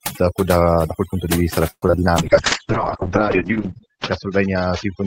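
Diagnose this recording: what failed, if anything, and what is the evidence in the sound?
Overdone noise removal, throughout: in the call-processing stage, a noise suppressor set far too aggressively pulls individual frequency bands down whenever they sit near its noise estimate. The background collapses to near silence with twinkling specks, and quiet parts of the speech vanish.

Repeated packet loss (robotic sound), 1.70 to 2.13 s, right after "punto di vista da": this is a network fault. Several holes, the longest about 120 ms, are each patched by extending the previous sound. More than half of the stretch is concealment, so the speech turns choppy with pieces missing.

Call bitrate drop, from 2.18 s to the end: the codec is re-targeted after the bandwidth estimate falls, consistent with a drop from about 40 kbps to roughly 9 kbps. The upper band is cut from 20 kHz to 8 kHz, and coding becomes coarser, so the speech sounds muffled and rough, worst for about a second.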